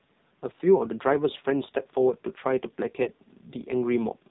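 A speech clip carried through the AMR narrowband mobile codec. Nothing above 4 kHz survives. The damage is heavy, and the voice sounds buzzy and synthetic, which points to a low bitrate of about 5.9 kbps. The codec rebuilds the voice from a simple vocal-tract model and a few pulses, so fine detail is lost. From 3.04 to 3.08 s there is a lost AMR speech frame. The decoder filled the gap by repeating its last pitch and tract settings at lower gain. This gives a brief dip or warble, which fits one missing 20 ms frame.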